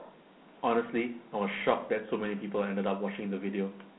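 Throughout, Dialogic VOX ADPCM coding leaves gritty hiss trailing the speech, with a spectrogram showing nothing above 3.9 kHz, consistent with 4-bit coding near 32 kbps.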